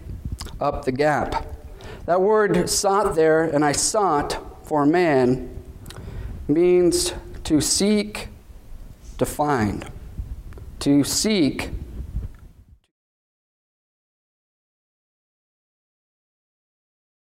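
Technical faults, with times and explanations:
No technical faults can be heard in this audio. Near the end the level eases down in a smooth fade out, starting at roughly 12 s and ending at 12.92 s with no click or hard edge.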